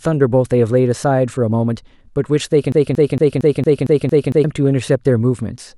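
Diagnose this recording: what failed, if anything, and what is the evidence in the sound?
A broken-record loop runs from 2.72 to 4.44 s: the same 0.23 s fragment of speech repeats exactly, eight times back to back. The likely cause is a stalled playback or stream buffer resending its last block. Unlike a stutter or dropout, nothing new plays, so the underlying speech is lost.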